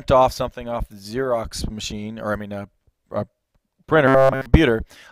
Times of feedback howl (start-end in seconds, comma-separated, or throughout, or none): none